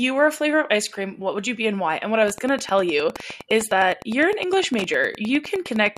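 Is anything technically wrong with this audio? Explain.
Yes. Wi-Fi interference runs from 2.19 s to the end: a nearby radio's beacon, rectified by the audio circuit, ticks every 102.4 ms, roughly 20 dB below the speech.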